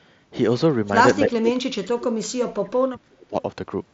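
From 1.22 to 3.37 s the speech ducks by around 35 dB and breaks up, likely speech suppressed in double talk.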